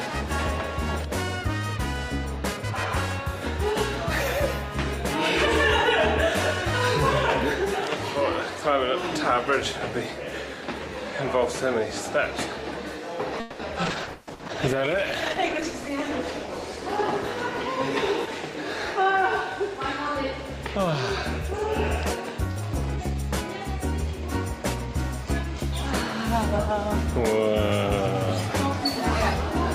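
Between 13.40 and 14.42 s, repeated packet loss (robotic sound) sets in: packets keep going missing or arriving late, and three holes are patched by extending the preceding sound, 390 ms concealed in all, about 38% of that stretch, with the longest gap 190 ms. Playback turns choppy and robotic, with 180 ms simply absent.

Inside that stretch, two skip-ahead events occur, at 13.89–13.93 s and 14.02–14.10 s. Audio already queued gets dropped so playback can catch up, cutting out roughly 70 ms and then roughly 100 ms. The sound jumps forward, with the two sides of each cut joined almost directly.

From 13.89 s a call bitrate drop begins: the bandwidth estimate falls and the encoder goes from 48 kbps down to 14 kbps, staying at its lowest for 1.82 s. Coding becomes coarser and high frequencies are cut at that rate, so the sound turns rough, watery or muffled until it clears by 20.21 s.

At 22.96–23.23 s, a jitter buffer speed-up trims excess queued delay by removing short pitch-period slices in quick succession, roughly 50 ms in total. 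The audio runs at 117% speed without a change in pitch, so it comes across as hurried.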